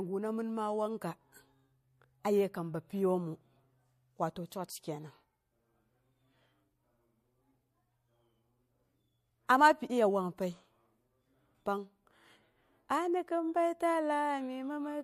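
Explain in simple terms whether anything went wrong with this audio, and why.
There's pre-echo on two sharp attacks in this speech, at 4.50 s and 9.47 s. Just before each one you get a short hiss, about 16 to 17 ms long, and the attack itself sounds soft and smudged. That's the codec spreading its noise across a long block, roughly 36 ms here, so the noise meant for the loud bit leaks into the quiet moment before it. It sounds like it never switched to shorter blocks to catch those attacks.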